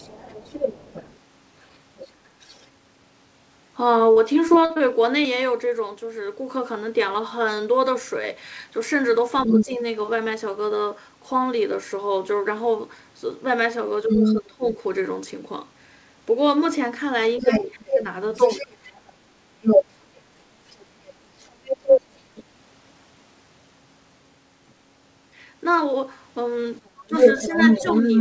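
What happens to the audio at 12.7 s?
Nothing goes wrong at 12.7 s: the speech runs on intact through the call path, which carries nothing above 8 kHz.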